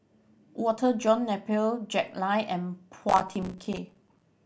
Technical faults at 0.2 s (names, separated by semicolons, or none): none